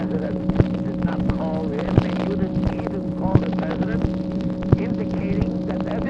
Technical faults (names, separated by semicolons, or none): none